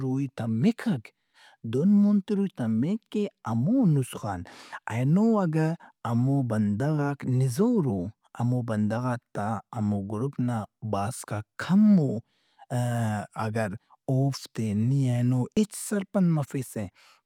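At 15.57 s the speech is broken by a brief blip, only a few milliseconds long. This is damaged data in the compressed stream. A small stretch of the encoded file was corrupted, so the decoder could not read the frame it expected there. It lost sync and had to search for the next valid frame header before decoding resumed. The result is a short glitch in the speech.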